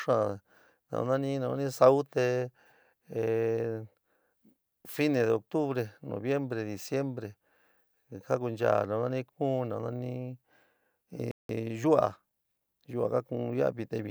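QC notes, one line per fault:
11.31–11.49 s, playback stall: the player likely ran out of buffered data or had its output thread blocked, so the speech drops to silence in mid-flow for 0.18 s, then resumes.
11.49–13.27 s, time-compressed catch-up: to clear the backlog left by the stall, the player cuts out small slices of audio and cross-fades the joins. The speech runs at 1.1 times normal speed with its pitch unchanged.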